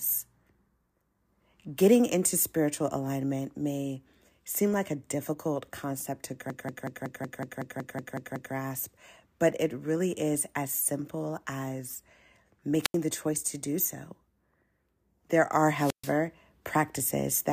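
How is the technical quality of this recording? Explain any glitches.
The recording has three clear technical faults: one long stutter and two brief holes in the speech.

From 6.50 to 8.55 s the sound locks into a rapid machine-gun stutter, the same fragment of about 186 ms repeating 11 times at roughly 5.4 Hz. This is a system hang loop. The computer or audio driver froze while the sound hardware kept replaying the ring buffer it already held, a loop length that fits an 8192-sample buffer. When playback resumes, essentially nothing appears to be missing.

At 12.82 to 12.95 s and again at 15.74 to 16.16 s, a short swell of hiss gives way to near silence before the speech returns. The gaps last about 83 ms and about 133 ms. These are wireless microphone squelch dropouts. The analogue FM radio link weakened until the receiver's squelch circuit muted its output to avoid passing raw static, then reopened once the signal recovered.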